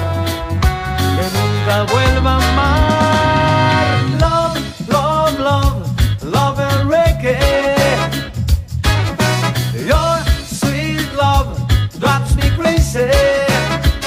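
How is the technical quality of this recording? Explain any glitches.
No glitches or technical faults can be heard here.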